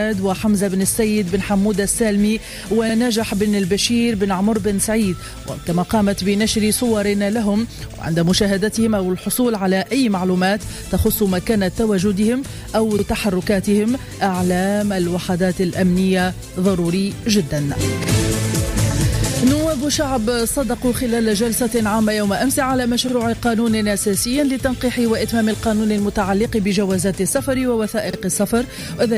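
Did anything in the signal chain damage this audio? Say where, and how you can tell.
Yes. Overlapping chunks, at the buffering or block-processing stage, cause a brief stutter at 2.90, 7.94, 12.99, 18.04, 23.09 and 28.13 s. Each is a replay of about 48 ms of audio, regular enough to fit 5-second chunks whose starts were placed slightly early. A dropout or gap would remove sound at the join, but here the material is repeated, so the seam sounds like a skip-back click.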